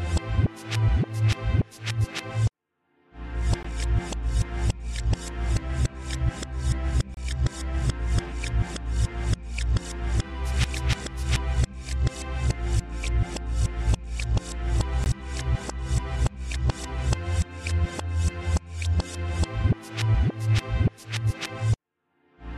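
At 3.63 s, 7.14 to 7.17 s, and 15.04 s the sound drops briefly into silence, lasting about 16 ms, 28 ms and 20 ms, and then resumes where it stopped. These are gaps at joins of encoded pieces. Each piece was encoded on its own and butted together untrimmed, so encoder start delay and last-frame padding remain at every join. On a waveform each shows as a short flat stretch with abrupt, slightly smeared edges. A spectrogram shows a thin vertical blank band.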